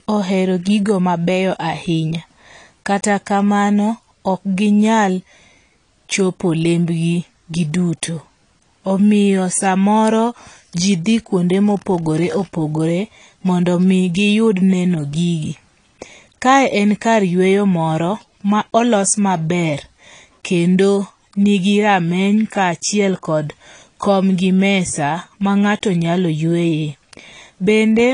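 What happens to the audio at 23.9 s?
At 23.9 s, as throughout, the speech sounds dull and smeared with a fizzy, warbling edge and nothing above 10.1 kHz, likely AAC compression at a low bitrate near 32 kbps.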